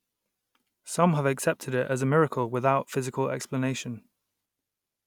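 A speech recording, and nothing is technically wrong with it.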